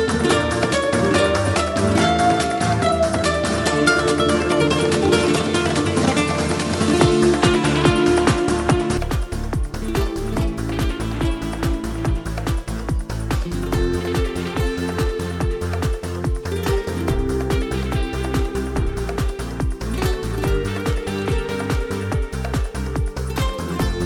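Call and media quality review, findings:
Input switched to a poorer device, 0.0–8.97 s: band stops near 11.4 kHz, added noise floor roughly 30 dB under signal, level about 5 dB different. Likely capture-path device change; clears at 8.97 s with no gap.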